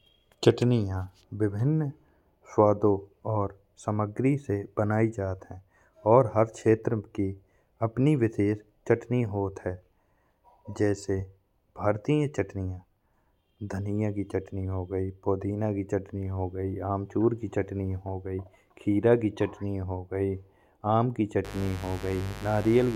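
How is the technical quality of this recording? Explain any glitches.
The recording has one clear fault, and it comes at the very end. From 21.45 s to 22.96 s a mains buzz appears. Switching spikes from something like a dimmer, a rectifier or an unshielded line leak into the signal path twice every 50 Hz cycle, spraying harmonics up into the kilohertz range. The result is a steady, raspy buzz, sitting roughly 15 dB below the speech.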